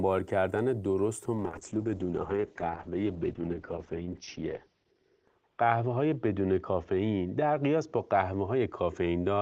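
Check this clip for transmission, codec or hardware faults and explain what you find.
One fault: a call bitrate drop from 1.35 s to the end of the speech. The encoder's bandwidth falls from 20 kHz to 6 kHz, and the coarser, muffled, watery sound fits a cut from about 32 kbps to 8 kbps. The call's bandwidth estimate fell, so Opus had far fewer bits and discarded the high band. The lowest rate holds for about 3.2 s.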